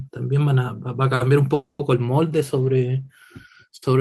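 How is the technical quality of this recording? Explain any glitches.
The recording has one glitch, a call audio freeze from 1.54 to 1.80 s. Packets were likely held up in transit, draining the jitter buffer, so the receiver stretched the last sound into a fading buzz or hiss that ends in about 90 ms of silence. The speech then resumes exactly where it stopped, now about 250 ms later, with nothing lost.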